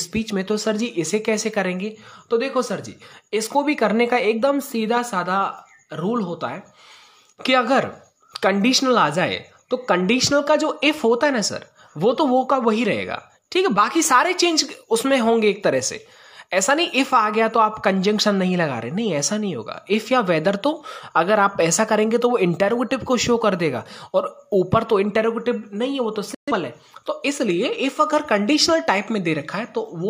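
At 26.34 s the sound cuts out abruptly. This is a digital broadcast dropout. The fade to silence takes only about 3 ms, so it lands as a sudden mute rather than a gentle dip. The receiver stopped getting usable frames and held the output silent until clean data returned. Audio resumes at 26.52 s. Around 128 ms of programme is simply missing, which fits roughly three lost frames. Nothing is repeated or smoothed over.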